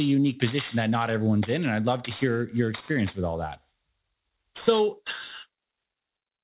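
Aliasing runs throughout the speech. The sample rate was cut without first filtering off content above the new limit, which fits a drop to 8 kHz, so energy above 4 kHz folds back to false pitches, some 20 dB down, making sibilants gritty and metallic.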